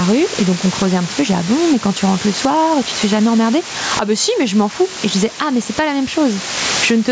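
From the first second to the end, a constant, even hiss sits under the speech, about 15 dB below the voice, with no crunch or distortion. This is low bit depth with dither: the signal is held to 6 bits, and dither turns the rounding error into steady white noise.

Throughout, the level is pumped up and down by around 15 dB, so soft and loud passages sit close together and sound squashed. This gain pumping is likely caused by input gain set far too high, with a fast limiter clamping it on each peak. The call microphone processing leaves nothing above 8 kHz.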